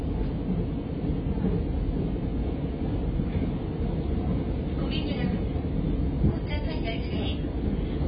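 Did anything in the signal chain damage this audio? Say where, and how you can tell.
Yes. The damage is at the codec stage, likely AAC compression, and it runs through the whole clip. Nothing is heard above 5 kHz. The sound is dull, smeared and warbly. This heavy damage fits a very low bitrate, around 16 kbps, which forces the coder to cut high bands and starve the rest.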